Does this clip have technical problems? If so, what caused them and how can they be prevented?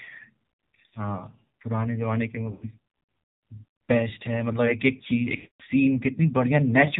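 Yes. The whole clip carries the sound of the AMR narrowband mobile codec at a rate that fits about 7.4 kbps. Nothing above 4 kHz survives, so the speech is dull and boxy. At this low bitrate the vocal tract model gets few pulses per frame. That leaves a plainly audible buzzy, synthetic edge on the voice. Prevention: use a wideband codec or a higher AMR mode when the network allows it.

Lost AMR speech frames cause two dropouts. The first runs from 2.52 to 2.68 s. It sounds like about 100 ms of missing speech. The second runs from 5.36 to 5.63 s and is longer, near 240 ms. In each gap the decoder repeats the last good pitch and vocal tract settings at falling gain. The sound smears, then fades toward silence, and the speech returns rough for a moment. Prevention: improve radio coverage or use stronger error protection on the link.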